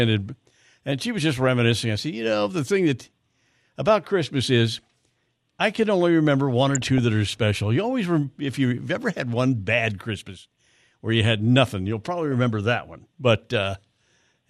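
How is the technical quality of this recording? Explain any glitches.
One short glitch mars this speech recording. From 6.71 to 6.98 s there is DAB burbling: weak reception let bit errors through, briefly putting short blips of noise into individual sub-bands. Unlike a dropout, it burbles rather than going silent.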